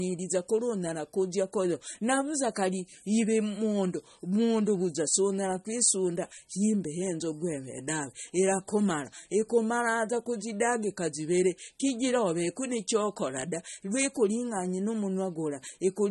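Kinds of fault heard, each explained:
MP3 compression: The speech sounds plainly watery and smeared, likely from MP3 encoding at a low bitrate such as 32 kbps.
Dropped samples: A single sharp click at 6.86 s, between "mundu vuza sunyara kwisunda" and "henzogu eve daave irakumara", likely from a couple of missing samples causing a waveform jump.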